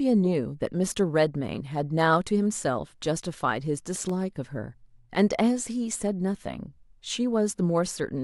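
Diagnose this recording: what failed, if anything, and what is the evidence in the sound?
The playback stage failed, with CD scratch ticks in the speech. Four short ticks fall between 3.82 and 4.23 s, roughly seven a second, each only a millisecond or two long. That regular spacing is the disc's rotation carrying a blemish under the laser once per turn. Each pass loses more data than error correction can rebuild, so the player interpolates or mutes the gap.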